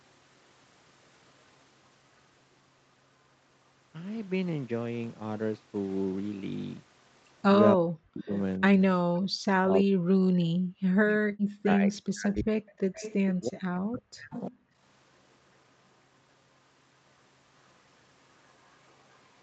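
Speech suppressed in double talk hits this speech recording at 7.75–8.81 s, 9.44–13.03 s and 13.39–14.51 s, where the voice dips by around 40 dB or breaks up, likely because an echo canceller turned everything down while both ends spoke at once. Echo leak appears at 11.93 s, 12.97–13.33 s, 14.33–14.57 s and 18.49–19.2 s as a delayed copy of the voice, trailing by 356–387 ms at roughly 10 to 40 dB below it, likely loudspeaker pickup the canceller failed to remove. Background gated by the echo canceller at 14.67–14.75 s briefly pulls the room sound down by about 17 dB before it returns. Across the recording, the audible band stops at 8 kHz, consistent with call microphone processing and Opus coding.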